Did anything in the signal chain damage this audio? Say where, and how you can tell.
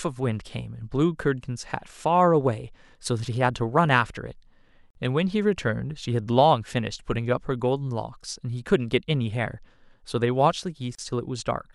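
Yes. The speech cuts to brief silence twice, from 4.90 to 4.95 s (about 47 ms) and from 10.95 to 10.99 s (about 34 ms), with smeared edges. Each time it resumes exactly where it left off. These are gaps at a join of encoded pieces, a codec-stage fault. The audio was encoded in 6 s segments and joined without trimming, so each run's start-up delay and last-frame padding remain as silence.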